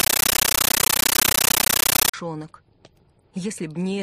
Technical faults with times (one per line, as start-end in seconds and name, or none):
0.00-2.14 compressed stream played as audio